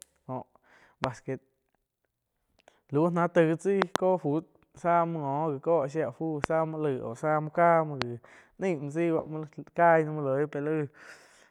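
Sharp loud pops jump about 20 dB above the speech at 1.04–1.06, 6.44–6.46 and 8.02–8.04 s, with a double pop near 25 dB at 3.82–3.98 s. The likely cause is voltage spikes from a switch, plug or static.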